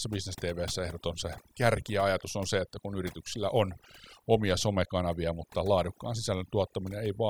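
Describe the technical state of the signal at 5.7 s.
At 5.7 s the speech sits over near silence flecked with twinkling specks. This is overdone noise removal, present throughout the clip: reduction set too strong mutes individual frequency bands near its noise estimate, stripping quieter vocal detail along with the noise.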